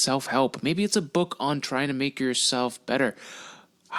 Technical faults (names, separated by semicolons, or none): compressed frames skipped